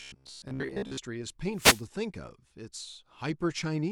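From 0.02 to 0.99 s the voice becomes a rigid, metallic buzz locked at about 66.7 Hz while still loosely tracking the speech. This robotic sound from repeated short buffers likely comes from a roughly 15 ms block being looped when new audio arrives late, replacing most of the real signal. From 1.53 to 1.86 s a wireless microphone noise hit occurs: a short swish of static rises over the voice as the FM radio link fades, letting receiver noise break through.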